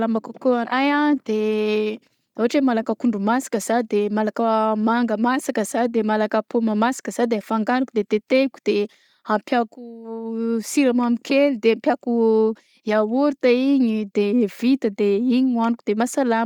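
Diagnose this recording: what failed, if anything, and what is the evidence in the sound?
Bluetooth LC3 compression runs through the whole speech recording, a codec-stage fault. The speech has a plainly audible breathy, grainy edge, and content extends to about 20.1 kHz. The likely cause is a transform codec thinning high bands and refilling them with noise, consistent with 10 ms frames at around 48 kbps.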